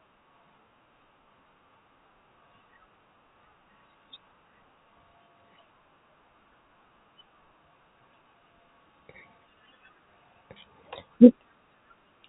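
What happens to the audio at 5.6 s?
Nothing goes wrong at 5.6 s: the speech runs on intact, with only the narrow telephone band of G.711 coding that is heard throughout.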